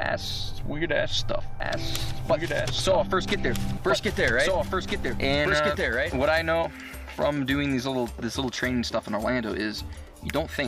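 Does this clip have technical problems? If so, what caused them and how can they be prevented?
Yes. From 1.6 to 6.4 s a second copy of the sound, about 5 dB quieter, trails about a second and a half behind, dry and abruptly switched: a doubled audio track, likely from a second, slower capture path or misaligned duplicate edit. Prevent it by routing only one capture path to the mix and checking edits for stacked duplicate regions.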